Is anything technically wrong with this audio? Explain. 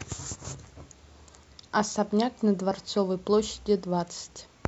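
No, nothing stood out as technically wrong on listening to this speech recording.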